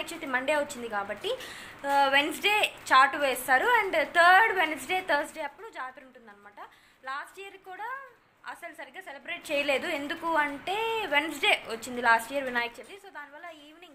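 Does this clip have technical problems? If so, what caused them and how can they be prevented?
Yes, zipper noise at 9.20 to 9.57 s (rising) and 12.54 to 13.10 s (falling): the level moves in 3 dB steps without smoothing, so each step ticks, unlike a clean fader. Interpolating gain per sample prevents it.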